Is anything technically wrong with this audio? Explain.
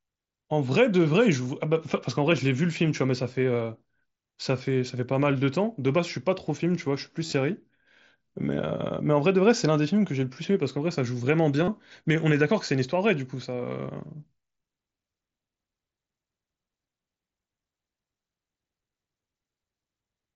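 Yes. The speech has concealed Bluetooth headset packet loss at three points. From 7.26 to 7.33 s, about 45 ms goes missing across 60 ms, with the longest gap 30 ms. The other gaps are at 8.78 to 8.80 s and 11.65 to 11.68 s. Each lost packet is patched by repeating the best-matching recent stretch of waveform. Longer runs give a brief buzzy, held tone, then a small warble as real speech resumes. The mSBC wideband link itself passes speech up to 8 kHz.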